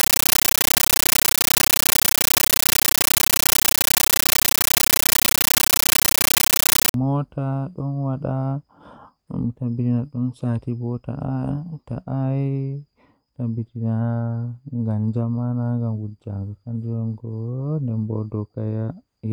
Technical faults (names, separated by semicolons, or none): compressed stream played as audio